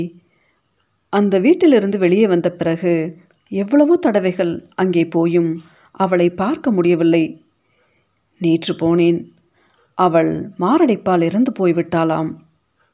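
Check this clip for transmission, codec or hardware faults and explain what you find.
No transmission, codec or hardware fault can be heard anywhere in the recording, and the speech signal stays continuous and stable throughout.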